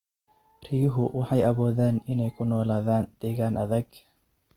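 Speech runs throughout with Opus compression plainly audible: the voice sounds grainy, rough and noisy rather than swirly, likely from the music (CELT) mode at a low bitrate near 24 kbps. A spectrogram shows bands filled with folded or noise-like texture rather than holes, extending to about 20.2 kHz.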